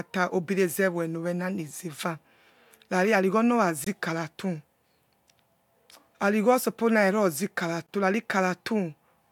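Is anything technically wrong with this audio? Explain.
Yes. The speech cuts out twice, from 3.84 to 3.87 s and again from 7.87 to 7.89 s, leaving short holes of about 21 ms. This is a gap between chunks. The audio appears to have been delivered in 4-second blocks, and silence was inserted at each join, likely from codec padding or a player starting each block late. No speech is lost; it is simply interrupted at each boundary.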